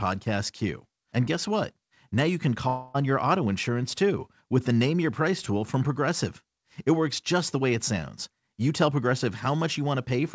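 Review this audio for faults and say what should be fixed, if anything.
Right after "you can", from 2.68 to 2.96 s, the speech turns into a smeared buzz that carries the last sound forward for a little over a quarter of a second. No silence is left in the gap, and the speech resumes at "on your auto insurance" with about 260 ms of the original missing. This is likely a long network dropout: packets stopped arriving, and the receiver's concealment stretched the previous sound across the whole hole before real audio returned. It sits on a call path using G.722 at 64 kbps, which carries nothing above 8 kHz. To prevent it, stabilise the network link or add forward error correction and a deeper jitter buffer so a short burst of loss doesn't erase a whole stretch of speech.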